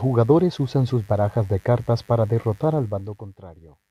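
A steady, raspy buzz runs under the speech throughout, roughly 35 dB down: mains buzz, where switching spikes on the 50 Hz supply leak in with harmonics. From 2.70 to 3.45 s a fast ticking rides on the sound as the level falls about 20 dB. This is zipper noise, with the gain stepped roughly fifty times a second without smoothing.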